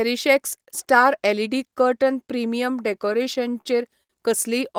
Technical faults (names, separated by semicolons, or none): repeated stalls (stutter); short stall from a late packet